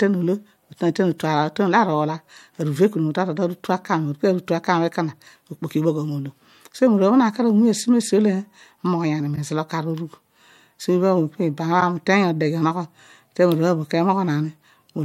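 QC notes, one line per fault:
9.35–9.38 s and 11.80–11.82 s, repeated frames: the speech hiccups twice, each time replaying a tiny slice of about 24 ms right after it first plays. That length fits a single compressed frame being sent or written twice, so the decoder plays the same chunk again. It comes across as a quick stutter. Each repeat also adds 24 ms to the running time.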